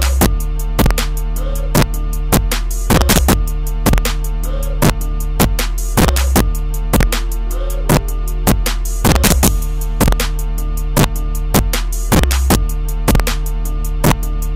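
A gain stage drove the signal about 3 dB past the integer limit without clamping, causing integer overflow: the loudest peaks wrap to the opposite sign, giving harsh cracks throughout.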